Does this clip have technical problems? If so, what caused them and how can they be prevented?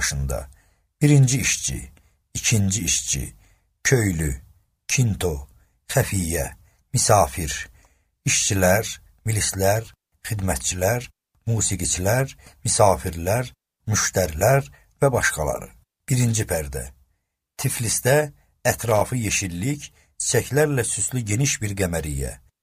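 Yes: loose connector crackle from 18.88 to 19.01 s, a worn contact making and breaking, chopping the signal briefly. Clean or replace the connector and secure the cable.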